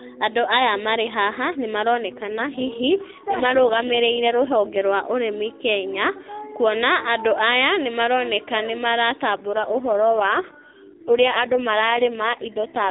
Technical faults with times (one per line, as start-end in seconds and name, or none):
2.08-4.81 AMR rate drop
9.36-12.90 AMR rate drop